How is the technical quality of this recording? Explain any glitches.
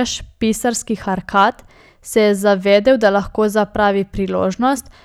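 The recording has two brief spots of hard clipping in the speech. From 1.37 to 1.43 s, and again from 2.72 to 3.06 s just before "da lahko zapravi", the peaks crackle. The level overran the stage's limit by about 2 dB and then about 1 dB, so peaks were sliced flat, adding high harmonics.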